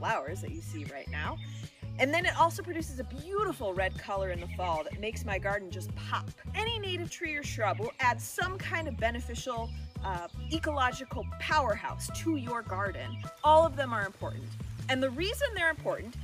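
No technical faults are audible.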